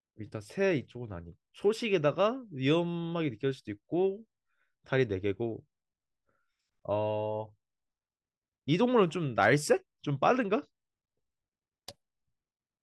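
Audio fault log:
No faults can be heard anywhere in the speech. Nothing in the clip calls for an entry in this log.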